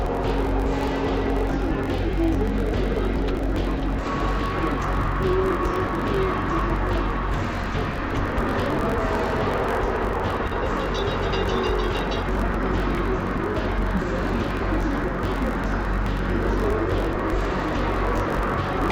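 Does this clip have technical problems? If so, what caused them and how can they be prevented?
Yes. Throughout the clip the audio sounds an octave low, doubled and choppy, with the choppiness recurring near 46.9 Hz. This is interleaved audio read as planar. Each 21.33 ms block, which fits a 1024-sample buffer, has its alternating left-right samples split into halves that play simultaneously at half speed. To prevent this, make sure the reading code is told the buffer's true channel layout, interleaved or planar.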